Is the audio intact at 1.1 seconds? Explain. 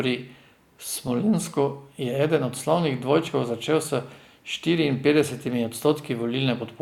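No. Compressed frames are skipped at about 1.07 s. A short run of the encoded stream never reaches the output, either missing from the file or rejected by the decoder as damaged, so playback jumps forward by whole frames. The jump is around 40 ms, which fits a couple of 20 ms frames being lost. The join comes out as a brief glitch, with a sliver of the sound cut away.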